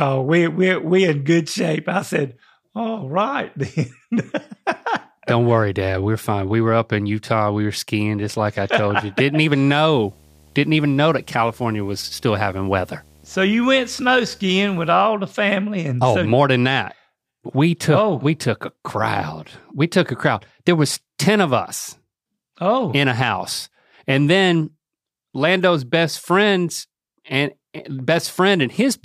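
From 9.92 to 14.95 s, right before "the family and oh", there's video or display buzz: a screen or video cable leaking into the audio, giving a 75 Hz buzz at the field rate with hash on top, sitting roughly 30 dB under the speech.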